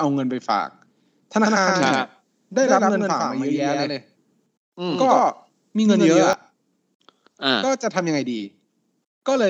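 From 1.43 s to 6.33 s the speech carries a doubled audio track: a second, full-band copy trails the original by roughly a tenth of a second at about the same level, giving a hard, slapback doubling with no decay or room colour. The copy cuts in and out abruptly at both ends. The likely cause is the same signal reaching the mix twice, once through a slower path, so the two copies sit out of step.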